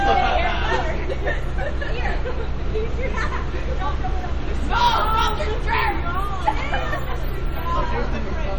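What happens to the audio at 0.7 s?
At 0.7 s, as across the whole clip, the sound is watery and swirly with smeared attacks, likely from MP3 compression at a bitrate near 48 kbps. Weak frequency lines flicker on and off between frames, which sets it apart from plain low-pass filtering, though nothing survives above 19.6 kHz.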